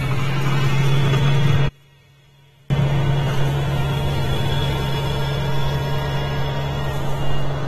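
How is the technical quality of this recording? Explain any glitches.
The recording has two clear problems: codec damage throughout and a brief collapse of the sound in the second second.

AAC compression, likely at a low rate fitting about 32 kbps, affects the whole clip. Nothing is present above 13.1 kHz, and the quantiser leaves a dull, smeared tone with fizzy, warbling textures. Unlike a plain low-pass filter, the remaining band itself sounds degraded.

From 1.68 to 2.70 s the level drops by about 34 dB, leaving only a faint residue. The likely cause is one channel inverted: summed to mono, the matching content in both channels cancels. A dropout would leave silence rather than this faint leftover.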